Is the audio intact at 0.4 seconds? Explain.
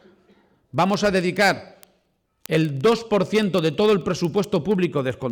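No. Word clock ticks run from 0.12 to 5.30 s: an unlocked receiver clock, off by roughly 500 ppm, drops or repeats single samples, giving sharp ticks at a steady rate of about 25 per second, unlike randomly spaced clicks.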